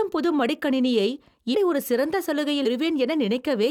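At 1.54 s, between "புது மடிக்கணினியை" and "ஒரு சிறந்த", and again at 2.65 s, after "ஒரு சிறந்த", compressed frames are skipped. The speech jumps ahead by about 200 ms and then about 150 ms, whole multiples of a 21.3 ms frame. Unlike a dropout, no silent gap is left.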